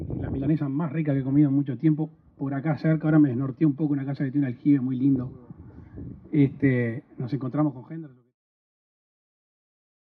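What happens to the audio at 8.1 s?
At 8.1 s the audio is intact, simply partway through a smooth fade-out that starts at about 7 s and closes at 8.37 s, with no click or hard edge.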